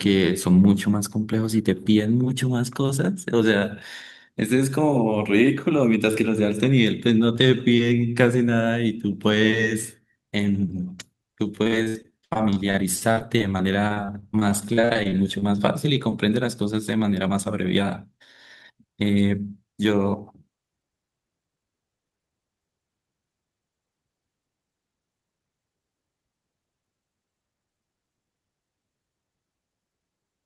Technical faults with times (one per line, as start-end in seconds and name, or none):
11.55-15.59 repeated packet loss (robotic sound)
19.67-20.01 jitter buffer speed-up